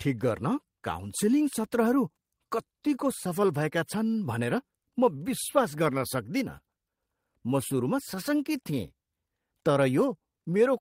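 Clock drift between sender and receiver runs through the whole of this speech recording: the sending device's clock is running slow, by roughly 4 percent relative to the receiver. Because samples arrive a little slower than the receiver plays them out, its jitter buffer keeps draining, and it has to stretch the stream to avoid running dry. It does this through small, unevenly spaced edits rather than a smooth rate change, so the timing never settles into a steady pace.

Repeated timing corrections run from 0.08 s to 10.57 s. The receiver keeps repeating short pieces of audio to fill the gap left by the slow sender, all in the same direction, and together they pad the stretch out by something like 400 ms. The speech therefore plays at about 97 percent of its natural pace, with the edits falling at irregular points.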